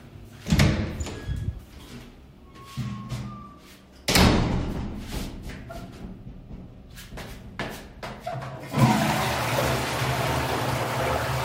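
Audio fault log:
No fault found: level, timing and continuity hold steady across the recording of sounds.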